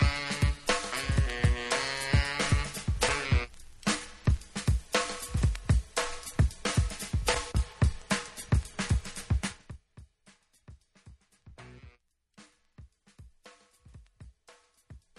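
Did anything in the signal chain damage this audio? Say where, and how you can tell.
Yes. Zipper noise appears between 9.40 and 9.81 s. It sits at the gain stage, in the driver or buffer processing. The level falls by roughly 25 dB there, but not as a clean fade. A fine ticking rides on the sound, about 20 clicks per second. Each tick marks a 3 dB jump applied at once, with no ramp between values. The ticks stop when the drop ends.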